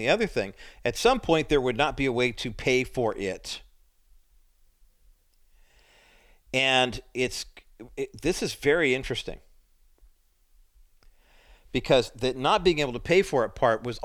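Nothing in this speech recording stands out as a technical fault, so there's nothing here to flag.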